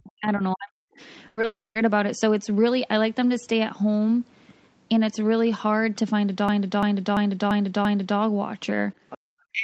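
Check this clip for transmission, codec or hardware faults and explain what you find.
Several faults are present: double-talk suppression at both ends, a cluster of packet-loss events around 1.3 to 1.9 s, a hang loop in the second half, and two echo-canceller artefacts near the end. The speech sits inside an 8 kHz band throughout, as expected from the call path.

From 0.00 to 1.01 s the speech is suppressed in double talk. For roughly 0.7 s in total the level drops in and out, at its deepest by around 40 dB, so the opening sounds pumped and partly missing. The likely cause is an echo canceller that heard both sides at once, could not tell this talker from loudspeaker echo, and attenuated everything it picked up.

From 1.27 to 1.39 s comes a burst of packet loss. About 100 ms of audio never played. The receiver filled that span by extending the last sound and fading it, so the speech turns into a brief held buzz or hiss. 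It then jumps ahead, having skipped the 100 ms in between, with no silent gap.

At 1.41 to 1.45 s there is a short concealed packet loss of 20 ms. The decoder bridged this small hole by continuing the preceding waveform and crossfading back into the real signal. It is heard as a quick smear or wobble.

From 1.45 to 1.89 s is a long network dropout, likely caused by audio failing to arrive for several hundred milliseconds. About 300 ms of speech is missing. The concealment first stretches the last sound into a decaying buzz or hiss. Then roughly 0.2 s of silence follows before the speech resumes further along, so the phrase is audibly cut.

From 6.49 to 8.19 s a system hang loop repeats one 341 ms segment exactly, five times, at about 2.9 Hz. That length fits a 16384-sample ring buffer that kept cycling while the driver or host stalled. It sounds like a slow, mechanical stutter: the same fragment replays identically before the stream continues, apparently without losing audio.

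From 9.09 to 9.18 s the other side's voice leaks through, around 15 dB below the main speech. Part of the far-end signal played on the loudspeaker was likely not cancelled from the microphone. It surfaces as a faint second voice underneath the talker.

From 9.18 to 9.24 s the background is gated by the echo canceller. For about 70 ms the room sound drops by around 40 dB as the canceller clamps the microphone during loudspeaker playback. It comes across as a brief hole in the ambience, which returns once the suppression releases.

From 9.52 s to the end, speech is again suppressed in double talk, with dips reaching around 40 dB. The likely cause is the same canceller confusion as at the start, with near-end speech overlapping far-end playback. The final syllables fade or cut out rather than finishing cleanly.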